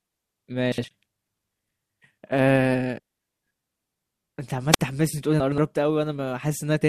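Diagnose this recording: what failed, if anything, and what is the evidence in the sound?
Two jumbled moments occur, at 0.72 to 0.84 s and at 5.4 to 5.58 s. These are chunks out of order in the buffer or network stage: a 60 ms block plays one slot late, then two slots late, leaving hard joins where it lands.

At 4.72 s, hiss swells and the sound drops into a hole of near silence lasting about 48 ms, then returns. This is a wireless microphone squelch dropout in the radio link: the FM signal faded until the receiver's squelch muted its output.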